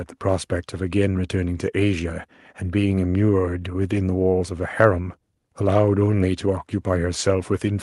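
Nothing is technically wrong with this speech clip; no faults are present at any point.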